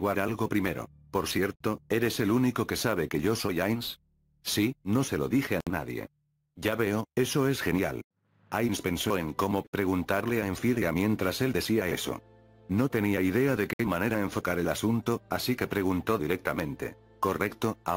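At 1.56 s the sound drops out for 48 ms, then resumes. The same break returns at 5.60 s, 9.67 s and 13.73 s, each about 64 ms long, roughly every 4 s. These are gaps at joins of encoded pieces. Each piece went through the encoder on its own. The encoder's start-up silence and final-frame padding were never trimmed before joining. Each gap has smeared edges. The sound then picks up exactly where it stopped.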